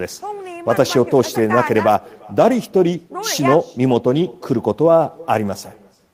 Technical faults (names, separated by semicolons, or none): echo with no canceller